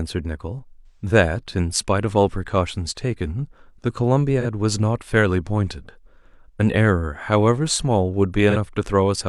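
AAC frame loss with concealment hits at 0.86 to 1.06 s, 4.40 to 4.45 s and 8.50 to 8.57 s. The decoder rebuilt the missing frames from the last good spectrum, so each gap sounds smeared, noisy or phasey rather than silent, unlike a plain dropout. The first, longer patch fits three lost frames.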